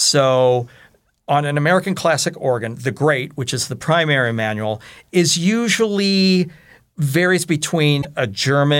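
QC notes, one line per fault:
8.01–8.05 s, broken MP3 bit reservoir: a disturbance of about 44 ms, close to two frames at the 26.1 ms spacing of standard MP3 frames, near the end of the speech. The likely cause is missing frames. The decoder fills the first frame after the gap with reservoir bytes borrowed from earlier frames, but those bytes now belong to unrelated audio, so the sound skips forward and the next frames decode as corrupted output.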